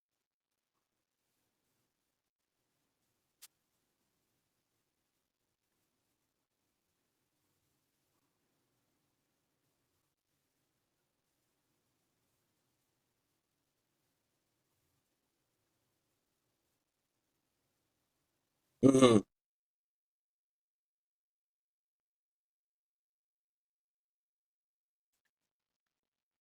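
A brief swish of static cuts across the speech from 3.42 to 3.47 s, a wireless microphone noise hit. The analogue FM radio link faded as reflected signals cancelled, letting receiver noise rise.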